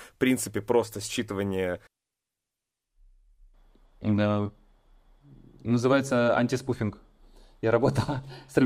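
Nothing stood out as a technical fault anywhere in the speech on listening.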